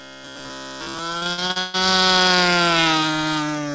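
Robotic sound from repeated short buffers runs from 0.02 to 0.99 s. A rigid, metallic buzz near 66.8 Hz sits over the sound while its rough outline still comes through. That pitch corresponds to a chunk about 15 ms long being replayed, so it is likely that new audio arrived too seldom and the playback filled the wait by looping its last short buffer. Roughly 70 percent of this stretch is repeated material rather than fresh audio.

Repeated packet loss with robotic sound follows from 1.18 to 1.76 s. The audio breaks up again and again here, with gaps close together and the longest lasting 141 ms. Each gap is patched by stretching out the sound that came just before, so about 316 ms of the span, around 55 percent, is concealment rather than real signal. The result is choppy and mechanical, with pieces of the sound missing. Throughout the clip nothing reaches above 8 kHz, which fits a G.722 call path at 64 kbps.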